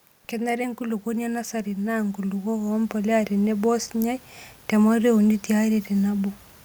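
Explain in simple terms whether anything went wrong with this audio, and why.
Between 0.3 and 4.26 s, just before "tematua e uni", the speech and the room noise behind it grow steadily louder together. This is automatic gain rising: the recorder judged the input too quiet and slowly turned up its own volume over those four seconds.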